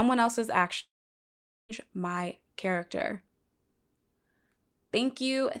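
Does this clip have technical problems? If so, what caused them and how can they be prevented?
Yes. From 0.79 to 1.72 s the sound breaks off: a brief fading continuation of the last sound gives way to about 0.82 s of silence, and it resumes at "my character" with roughly 0.9 s lost. This is likely a long network dropout, with the receiver concealing missing packets. Preventing it requires a more stable connection, larger jitter buffering, or forward error correction and retransmission on the link.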